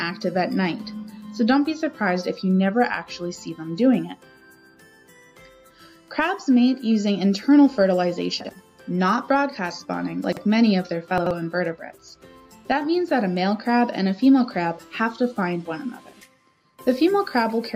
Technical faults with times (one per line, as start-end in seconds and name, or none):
8.41-8.49 chunks out of order
10.24-10.37 chunks out of order
11.18-11.31 chunks out of order